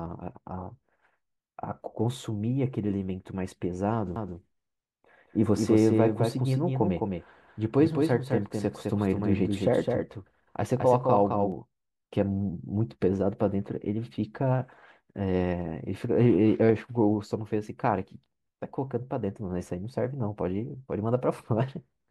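A doubled audio track runs from 4.16 s to 11.52 s. A second, full-band copy of the speech sits roughly 200 ms behind the original and some 5 dB quieter, which likely comes from the signal being captured twice, once through a slower path. The lag gives a clear slapback echo on every syllable, with no decay or room colour, and the copy cuts in and out abruptly at those two times.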